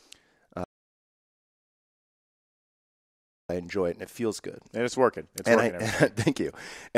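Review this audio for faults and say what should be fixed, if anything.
At 0.64 s the speech cuts off abruptly into dead digital silence, with no room tone or hiss underneath, and it snaps back mid-flow at 3.49 s. About 2.85 s of the talk is simply missing. This is an audio dropout to silence, likely from the input being lost through a loose connection, a failed link or an accidental mute while the recorder kept writing silence. Secure cables and monitor input meters during capture, then re-record the missing passage.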